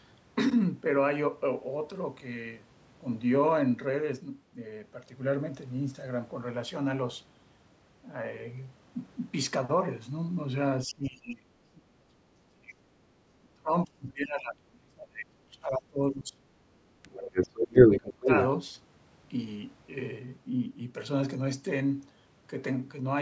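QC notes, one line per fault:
10.85–12.15 s, 12.48–12.77 s, 13.41–16.39 s, 17.03–18.29 s: speech suppressed in double talk. The talker drops in level in pieces, by up to about 30 dB in the first and third runs, about 25 dB at 12.48 s and about 20 dB at 17.03 s. Roughly a second and a half, a third of a second, three seconds and one second are affected. The likely cause is an echo canceller that could not tell the near talker from loudspeaker echo while both sides spoke, so it attenuated everything.
11.05–11.1 s, 17.02–17.08 s, 17.24–18.0 s, 18.21–18.44 s: other side's voice leaking through. The first two are brief scraps sitting about 30 dB under the talker. The last two are louder than the talker, by about 10 dB from 17.24 s and about 5 dB from 18.21 s, and overlap the suppressed stretch ending at 18.29 s. The likely cause is far-end loudspeaker output reaching the microphone and escaping cancellation. 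It arrives band-limited like the rest of the call path, with nothing above 8 kHz.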